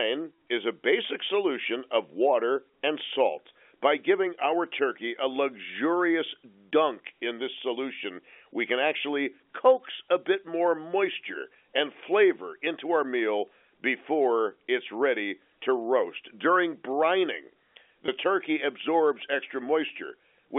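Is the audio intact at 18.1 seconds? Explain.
No. Packet loss with pitch repetition occurs from 18.06 to 18.08 s, just before "turkey absorbs". About 20 ms of audio went missing, which fits a single lost 20 ms packet. The receiver filled the gap by repeating the last pitch period it had received and fading that copy out. Because the gap is so short, it sounds like a slightly held, buzzy note rather than a dropout to silence.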